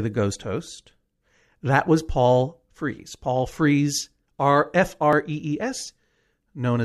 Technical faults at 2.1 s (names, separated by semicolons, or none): none